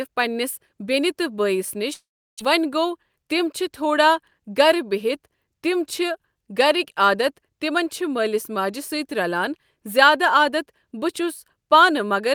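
A long network dropout runs from 1.93 to 2.41 s, just after "بٲیِس نِش". The speech breaks into a fading buzz that gives way to about 350 ms of silence, with roughly 400 ms of audio missing when it resumes. This likely reflects packets that stopped arriving for nearly half a second.

A jitter buffer speed-up follows from 2.98 to 3.36 s. The receiver trimmed short pitch-period pieces, around 40 ms in total, to shrink excess buffered delay, so the speech plays about 8% faster at unchanged pitch and sounds briefly hurried.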